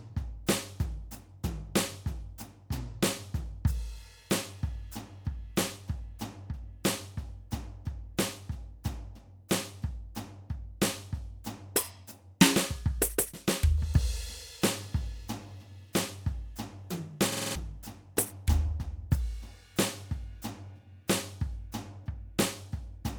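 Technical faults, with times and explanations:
17.32–17.55 s, system hang loop: the music freezes into one 46 ms fragment repeated five times at about 21.5 Hz, a stutter from a stalled 2048-sample buffer.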